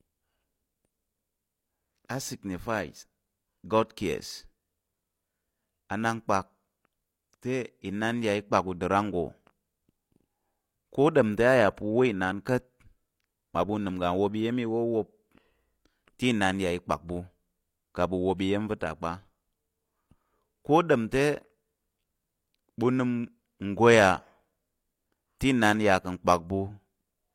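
From 18.37 to 18.40 s, just before "iya̱m va̱", a pre-echo appears: transform-codec quantisation noise spread across the block fills about 25 ms of hiss ahead of the attack, softening it. Unlike reverb or echo, the smear precedes the onset rather than trailing it.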